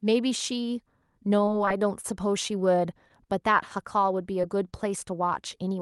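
From 1.45 to 2.06 s the speech turns choppy and robotic: repeated packet loss (robotic sound). Five separate gaps fall in this stretch, the longest 28 ms, about 60 ms of audio in total. Each hole was patched by extending the preceding sound, so roughly a seventh of the span is synthetic. On a spectrogram, harmonics freeze into flat, smeared bands at each gap. The waveform shows short, overly regular repeated cycles where detail should vary.

Two brief episodes of short concealed packet loss follow, at 2.48 to 2.51 s and at 4.42 to 4.45 s. Each lost about 20 ms that the decoder covered by continuing the last sound before blending back. Each one is heard as a quick smear or wobble. On a spectrogram there is a thin vertical seam where the texture goes briefly smooth. In the waveform, a few cycles repeat too evenly. Above everything, the Opus call path's energy stops near 12 kHz.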